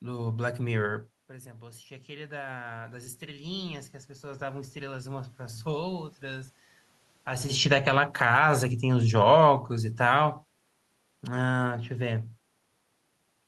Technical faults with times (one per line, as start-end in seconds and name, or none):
1.58-5.69 automatic gain rising
7.56-10.34 automatic gain falling